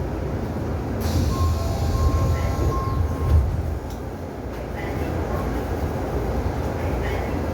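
No technical faults can be heard in this audio.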